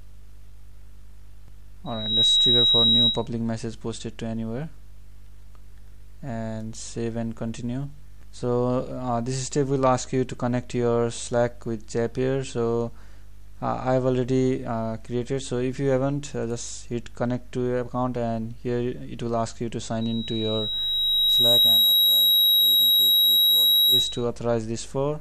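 Loudspeaker feedback squeal at 1.86–3.27 s and 20.01–24.25 s. A microphone hears its own loudspeaker. A 3.8 kHz tone swells, fast then slowly, roughly 10 dB above the sound.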